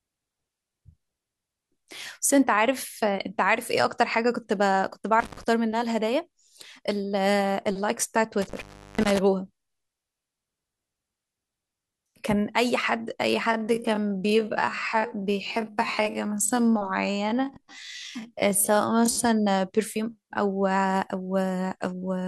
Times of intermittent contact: 5.20-5.43, 8.42-9.19

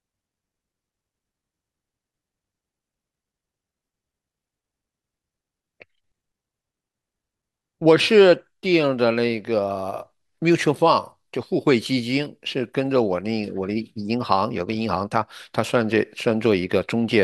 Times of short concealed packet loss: none

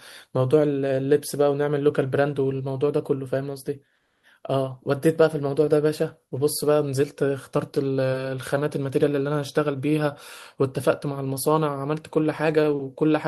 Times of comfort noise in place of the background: 3.95-4.23

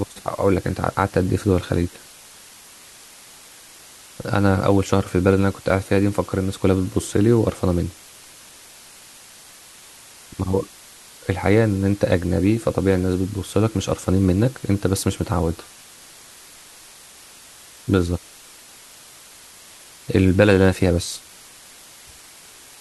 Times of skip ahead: none

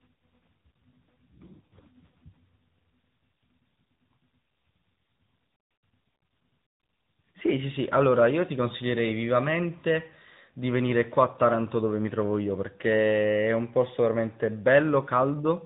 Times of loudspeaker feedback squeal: none

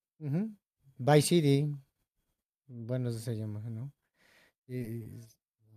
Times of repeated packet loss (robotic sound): 4.59-5.18

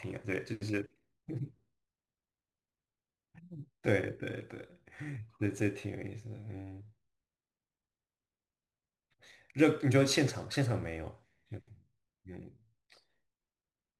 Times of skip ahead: none

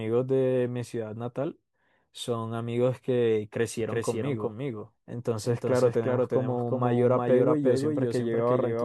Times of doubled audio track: 3.81-8.84

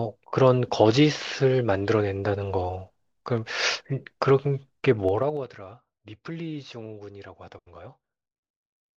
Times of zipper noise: 5.05-5.45

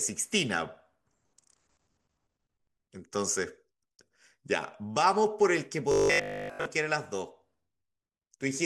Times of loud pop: none

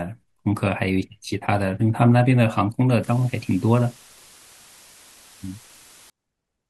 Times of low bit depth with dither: 3.03-6.10

